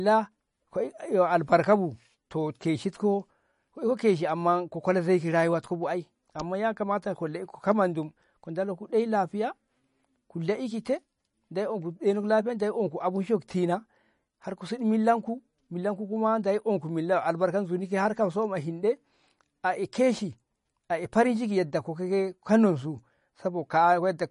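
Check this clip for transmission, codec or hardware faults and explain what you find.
The audio shows MP3 compression damage from start to finish. Nothing above about 10.5 kHz survives, and the speech has a watery, swirling quality, with metallic chirps on s sounds and smeared consonant onsets. That pattern likely comes from an MP3 encoder starved of bits, which fits a low bitrate around 40 kbps: it cuts the treble at a fixed point and drops weak frequency lines that flicker on and off between frames. A plain low-pass filter would dull the top end without that shifting, chirping texture.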